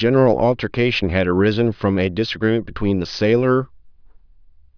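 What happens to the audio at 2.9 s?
Nothing goes wrong at 2.9 s; the speech plays through that moment intact, with no dropout, click, distortion or other fault.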